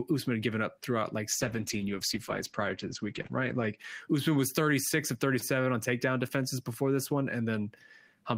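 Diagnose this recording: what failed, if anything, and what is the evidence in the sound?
Call bitrate drop at the codec, 1.32 to 3.83 s: speech turns coarse and muffled as bandwidth narrows from 20 kHz to 8 kHz, which fits roughly 11 kbps encoding.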